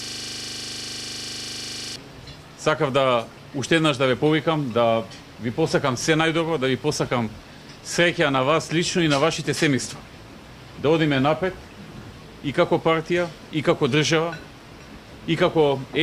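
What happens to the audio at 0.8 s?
A system hang loop is in progress at 0.8 s. It is already under way when the clip begins and lasts until 1.96 s. The computer or its audio driver has stalled, but the sound hardware keeps replaying the last 40 ms of its ring buffer, so the same short fragment repeats exactly, close to fifty times. At 25 repetitions per second, this comes across as a rapid, rigid stutter bordering on a coarse 25 Hz buzz.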